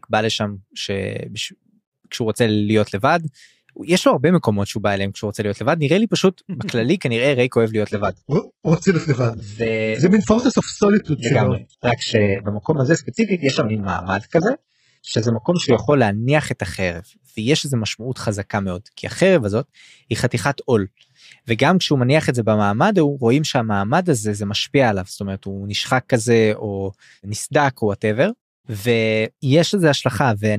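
From 7.92 s to 15.92 s the speech switches abruptly, without a gap, to an adaptive stream at a lower bitrate after the connection slowed. Nothing reaches above 8 kHz and the treble drops, suggesting a very low-rate HE-AAC stream.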